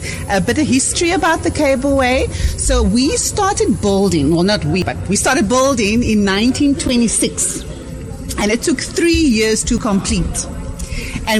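You get two quick skips in the audio, at 4.82 s and 9.78 s, each losing something like 40 ms with the two sides butted straight together. The 5-second spacing points to audio missing between chunks, likely dropped while the recorder handed off from one block to the next.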